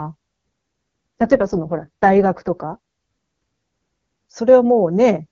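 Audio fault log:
1.19–2.78 s, AMR rate drop: The speech turns rough, buzzy and synthetic for about 1.6 s, then clears again, with no gap and no loss of bandwidth. The harshness fits the AMR-WB codec being pushed from its top 23.85 kbit/s mode down to about 6.6 kbit/s, leaving too few bits to model the excitation. On a spectrogram the band edge stays put, but harmonics smear into noisy texture; the waveform shows no dropout.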